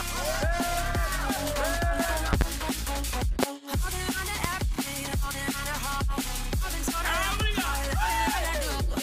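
Loud pops occur at 2.33 to 2.44 s (a double), 3.43 to 3.46 s and 4.44 to 4.47 s, roughly 20 dB above the sound, likely voltage spikes from a switch, plug or static.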